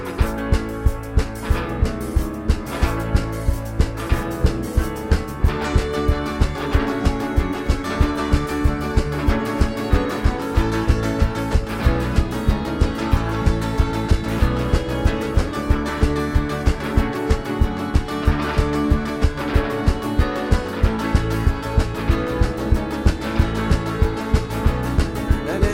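No dropouts, glitches, distortion or timing errors turn up anywhere in the audio, so there is nothing to flag.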